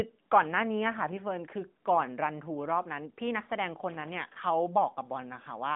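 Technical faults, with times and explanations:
0.97–1.21 s and 3.90–4.14 s, loose connector crackle: a worn contact rapidly makes and breaks, chopping the signal into irregular scratchy bursts about a quarter-second long. The waveform shows jagged dropouts and spikes, and the spectrogram shows broadband vertical streaks across the speech.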